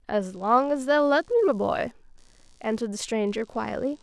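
Computer activity noise enters at 0.33 s and continues to the end: a faint buzzing pulse near 70 per second, roughly 40 dB below the speech. Shifting processor or peripheral load disturbs the ground shared with the audio circuit, injecting chatter that follows the computer, not the speech.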